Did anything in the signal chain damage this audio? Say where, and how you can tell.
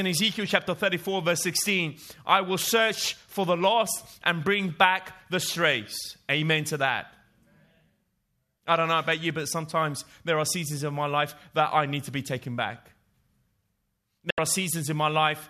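Yes, there's a digital broadcast dropout near the end of the speech, from 14.30 to 14.38 s. The sound fades out in about 3 ms, leaves a silent gap of roughly 72 ms, then picks up again further along, so that stretch is gone rather than smeared. The fault sits at reception and decoding: the receiver hit frames it couldn't trust and muted until clean ones arrived. A hole that size fits about three lost frames.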